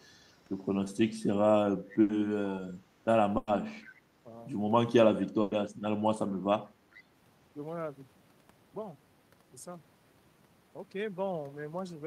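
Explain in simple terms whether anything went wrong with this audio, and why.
Yes, a few things went wrong, all of them typical of a call over the internet.

There are three bursts of packet loss, at 2.01 to 2.11 s, 3.37 to 3.49 s and 5.41 to 5.53 s. Each time, a chunk of the speech, 80 ms in the first and 100 ms in the other two, never arrived in time. The receiver covered the hole by stretching out the last bit of sound and fading it, then jumped ahead. So you hear a brief smeared blip, and that slice of speech is simply gone.

At 3.84 to 4.01 s and again at 6.95 to 7.02 s there's an echo leak: a faint ghost copy of the talker arriving about 0.45 s late. Most likely the far end is on a loudspeaker and its echo canceller didn't fully scrub out what its microphone picked up, so a quiet, delayed trace got sent back. Both times it's low-level and short, more a shadow than a clear repeat.

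Right at 3.99 to 4.03 s, overlapping the end of that first echo, the speech briefly dips for about 40 ms. That's speech suppressed in double talk, likely caused by the echo canceller hearing two things at once and turning everything down to be safe. The drop is mild and very short, so it sounds like a tiny stumble in level rather than a dropout.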